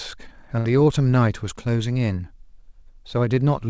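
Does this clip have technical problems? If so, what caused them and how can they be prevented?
Yes. A burst of packet loss runs from 0.59 to 0.68 s. Several packets in a row failed to arrive in time, so the receiver stretched the last stretch of speech it had for about 56 ms, letting it fade as a held, smeared sound, and then jumped ahead to fresh audio. About 60 ms of speech in between is simply missing. The call path's band limit at 8 kHz, which fits G.722, applies throughout the clip. Adding forward error correction or redundant packets, and giving the jitter buffer more headroom on an unstable network, would let the receiver recover such a short loss instead of concealing it.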